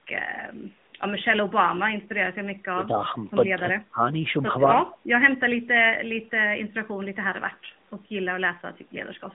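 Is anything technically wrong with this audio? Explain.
Yes, there are two problems.

AMR narrowband mobile codec, throughout: the speech has been squeezed through a 2G/3G-style mobile codec that samples at 8 kHz and rebuilds the voice from a vocal-tract model and a sparse set of pulses per subframe. Nothing above 3.8 kHz survives, and the usable band sits at roughly 150 Hz to 3.7 kHz. The coding damage is plainly audible as a buzzy, synthetic edge on the voice, which fits a mid-rate mode of about 10.2 kbps.

Speech suppressed in double talk, 3.56 to 4.03 s: the voice dips sharply in pieces across this half-second, falling by around 25 dB at its deepest, with roughly a fifth of a second of the span affected in total. The likely cause is an echo canceller that could not tell the near talker from loudspeaker echo while both sides spoke at once, and so attenuated everything it heard.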